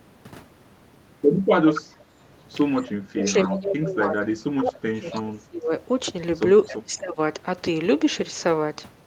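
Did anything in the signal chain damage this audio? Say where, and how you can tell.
Yes, in call processing. Echo leak: a delayed copy of the speech returns at 1.74–1.96 s, 2.77–2.82 s, 5.11–5.15 s and 6.64–6.73 s, consistently 274 ms behind, about 10 to 30 dB down. Likely a far-end loudspeaker echo the canceller failed to remove.

Speech suppressed in double talk: the level sags by up to about 25 dB from 2.83 to 5.72 s and again 6.71–7.18 s, each time coinciding with the returning echo. The canceller likely mistook overlapping talk for echo and attenuated everything.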